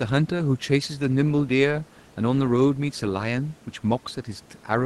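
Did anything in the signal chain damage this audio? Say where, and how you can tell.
No, the chain is intact: the speech has the roughly 12 kHz top end of an Opus call path at a setting that sounds consistent with about 20 kbps, and the room's own background noise sits about 31 dB below it.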